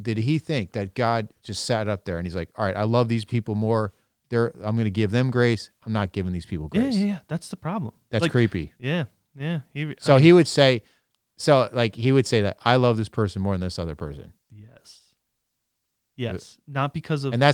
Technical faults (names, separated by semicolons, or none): none